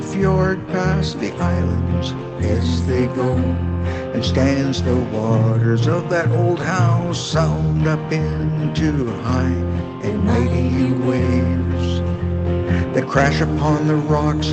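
No faults can be heard.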